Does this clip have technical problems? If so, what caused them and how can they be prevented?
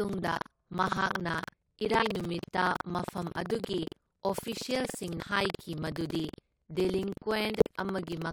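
Yes. Buffer tearing runs through the whole speech clip as a steady robotic rattle at 21.5 Hz, which fits a 2048-sample buffer. The writer and reader have slipped, so a small slice of each buffer repeats audio about a tenth of a second old, with hard joins. Keeping the writer ahead of the hardware read position prevents it.

Damaged data in a compressed stream gives short glitches from 2.01 to 2.03 s, just before "ꯅꯨꯃꯤꯠꯇ ꯃꯐꯝ ꯑꯗꯨꯒꯤ", and at 5.19 s and 7.61 s. Corrupt bytes throw the decoder out of sync until it finds the next frame header. Checksummed, reliable transfer prevents it.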